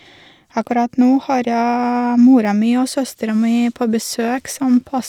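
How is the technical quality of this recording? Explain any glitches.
The recording has one glitch. At 2.45 s, just before "mi og", there is a dropped buffer (overrun), likely because the program didn't read its samples before the hardware overwrote them. A few milliseconds of speech vanish and the two sides join directly, so the sound jumps ahead. There is no gap of silence, which is what separates it from an underrun.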